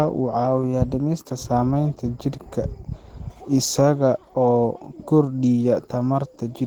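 A speech recording with plainly audible codec damage throughout. The sound is hoarse, muffled and grainy, though the band still reaches about 20 kHz. The likely cause is Opus compression in its hybrid speech mode, at a low rate that fits roughly 16 kbps.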